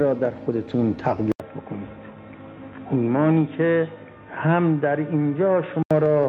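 Input switched to a poorer device, from 1.32 s to 5.91 s: an 80 ms gap opens, then the sound turns dull with nothing above 3.8 kHz, a faint new noise floor and unchanged level. The likely cause is recording shifting to a narrower-band microphone.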